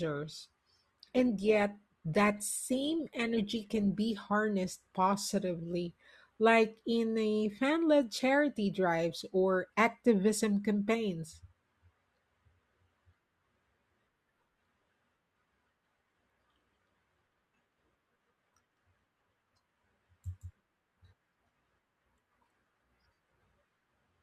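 From 0.0 to 4.0 s the speech plays from an adaptive stream starting at a low bitrate. The player opened on a cheap version to start quickly. The top end is thin and partly synthetic, with strong codec smearing. This fits an Opus stream near 24 kbit/s. At 4.0 s the player has measured the connection and switches up. Clarity jumps at once, with no gap, consistent with about 64 kbit/s.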